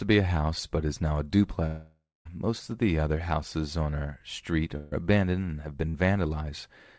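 From 1.66 to 2.27 s the speech gives way to a fading buzz or hiss and then about 0.22 s of near-silence, a pattern that points to a long network dropout as the likely cause. Roughly 0.6 s of audio is simply gone. On a spectrogram the last harmonics smear flat and thin out into an empty band before the speech resumes abruptly.

A burst of packet loss follows at 4.77 to 4.93 s, where about 140 ms is missing. The receiver holds and dims the last sound, so the waveform shows a decaying continuation with no silence. A shorter burst at 5.89 to 5.96 s drops about 40 ms and leaves a brief smeared stretch. In both places the spectrogram shows frozen, fading bands, all sitting under the G.722 call path's 8 kHz ceiling.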